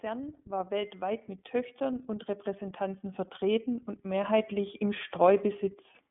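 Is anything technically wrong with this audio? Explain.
Yes. Throughout the speech, the iLBC codec is plainly audible. Each 30 ms frame is coded on its own, and nothing above 3.7 kHz survives, so the speech sounds rough and synthetic. A simple band-limiting filter would dull the sound without adding that grain.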